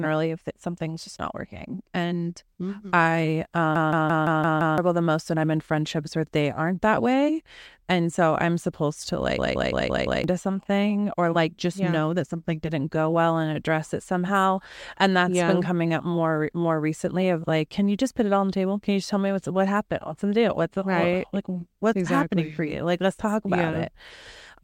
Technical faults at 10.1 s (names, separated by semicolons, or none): system hang loop